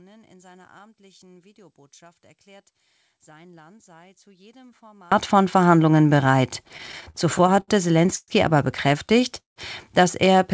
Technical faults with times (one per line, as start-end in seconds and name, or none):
0.00-5.12 one channel inverted
6.64-7.71 repeated stalls (stutter)
8.16-8.31 call audio freeze
9.08-9.59 repeated stalls (stutter)